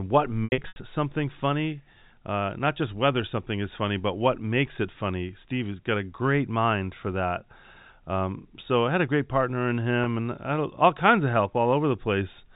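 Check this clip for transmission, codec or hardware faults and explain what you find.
Packet loss with pitch repetition shows up twice; the G.711 telephone coding underneath, band-limited to 4 kHz, carries the speech as expected. From 0.44 to 0.76 s, just before "something funny", about 220 ms of packets went missing across a 320 ms stretch, which fits eleven 20 ms packets. The longest run was 80 ms. The receiver filled each hole by looping the last pitch period, which gives a held, buzzy tone. The 80 ms gap outlasts the roughly 50 ms fade, so it sinks toward silence before the speech cross-fades back. At 10.04 to 10.06 s, between "a great partner in" and "and I had all", a single 20 ms packet dropped and became a brief buzzy hold.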